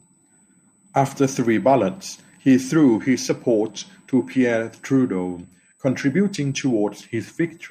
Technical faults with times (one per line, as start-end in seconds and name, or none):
0.00-7.71 USB whine